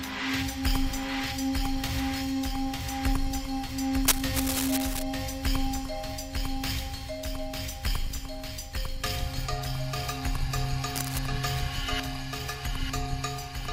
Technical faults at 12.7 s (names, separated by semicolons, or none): none